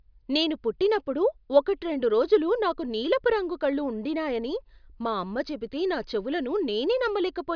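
Nothing stood out as a technical fault on listening to this speech recording.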